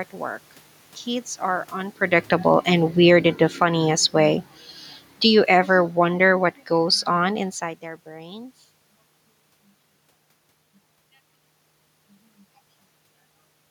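Automatic gain falling, from 2.07 to 4.51 s and again from 5.19 to 7.52 s, just before "their brains": the gain control judged the input too loud or its background too noisy and eased its gain down by about 4 dB, then about 5 dB, so voice and room noise sink together.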